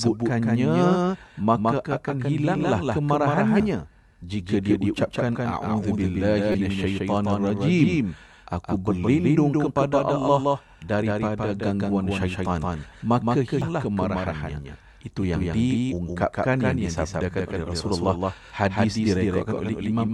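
A second copy of the speech trails the original through the whole clip by roughly 150 ms, about 5 dB quieter. It is a clean, full-band duplicate with no decay or room colour, so it sounds like a hard slapback echo rather than reverberation. This is a doubled audio track, most likely the same signal captured a second time over a slower path and mixed in with the original, holding a fixed lag throughout.

Brief digital blips break through at 3.6 s, from 6.51 to 6.55 s, and at 13.62 s, just after "daripada gangguan syaitan maka". These are damaged data in a compressed stream. Corrupted bytes made the decoder misread those frames and lose sync. It then searched for the next valid frame header and resumed from there.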